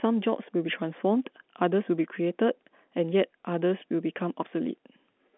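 No technical faults can be heard anywhere in this speech clip. It comes through a G.711 telephone path working as it should, with the band held to roughly 200 Hz to 3.4 kHz and nothing above about 3.6 kHz, plus at most a faint trace of the format's own coding noise.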